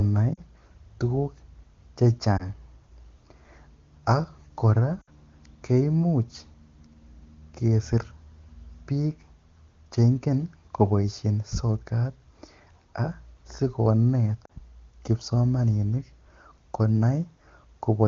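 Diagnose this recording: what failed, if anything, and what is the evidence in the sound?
Lost AMR speech frames on the radio link: brief dips at 0.34, 2.37, 5.02 and 14.45 s, roughly 20 to 60 ms each. The clear AMR-WB decoder, fitting a high-rate mode, extrapolates pitch with falling gain, so the sound fades quickly rather than cutting to silence or clicking like a buffer underrun.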